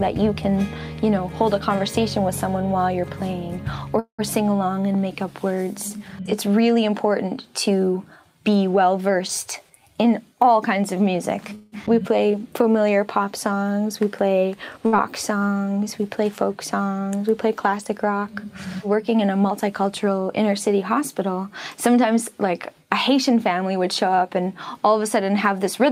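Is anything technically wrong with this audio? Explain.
Yes. There are five kinds of network playback fault in this audio.

Call audio freeze, at 3.99 to 4.21 s and again at 11.55 to 11.74 s. Packets were likely held up in transit until the jitter buffer ran dry. The receiver extended the last sound as a buzz that decays, and the first instance ends in about 110 ms of silence. Nothing is lost: about 191 ms and 170 ms of gap are inserted, and playback resumes where it stopped. On a spectrogram, the harmonics smear horizontally and fade out. The waveform shows a tapering envelope, which in the first case drops to a flat line.

Jitter buffer speed-up, from 9.63 to 11.52 s. The buffer was holding more than its target, so the receiver repeatedly cut out pitch-period-sized slivers, roughly 150 ms in total. The audio runs at about 107% speed with unchanged pitch and sounds slightly hurried. The spectrogram keeps the same harmonic spacing, while events sit a little closer together in time. 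The waveform shows small discontinuities where cycles were spliced out.

Skip ahead, at 11.86 to 11.88 s. Right after the second freeze, audio was dropped in transit or by an overflowing buffer while later audio was already waiting, so roughly 70 ms was discarded. Playback jumps forward with only a few milliseconds of fill, and the two sides are butted together. The spectrogram shows an abrupt change in spectral content at a vertical seam. The waveform shows an envelope jump with no pause.

Jitter buffer slow-down, from 12.27 to 12.73 s. The buffer was running low or had just raised its target delay, so the receiver repeated single pitch periods to rebuild its reserve, adding 64 ms. The audio plays at about 88% speed with unchanged pitch, and sounds are drawn out. On the spectrogram, harmonics stretch longer horizontally while their spacing stays the same. The waveform shows near-identical cycles repeated in succession.

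Burst of packet loss, at 14.87 to 14.94 s. A run of packets totalling about 60 ms was lost or arrived too late to play. The receiver concealed the hole with 58 ms of the last sound, turned down as it went, before resuming further along. The skipped material is gone. A spectrogram shows a brief frozen, dimming spectrum followed by a sudden change, and the waveform shows a short decaying repetition.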